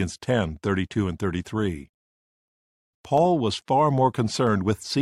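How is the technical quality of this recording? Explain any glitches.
Three sharp clicks mar the recording, at 0.31 s, 3.18 s and 4.47 s. Each is a single brief tick with a thin vertical line across the spectrum. The likely cause is dropped samples: a tiny fraction of a millisecond of the stream goes missing, so the waveform leaps straight from one value to a later one. That gap is far too short to remove any audible sound. Only the abrupt discontinuity is heard, as an isolated click.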